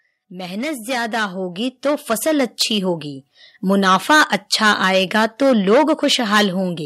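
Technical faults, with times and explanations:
0.27–3.32 s, automatic gain rising: the voice and the background noise floor swell together, climbing about 13 dB over roughly three seconds. The automatic gain control judged the input too quiet and raised its gain gradually, lifting everything it hears at once.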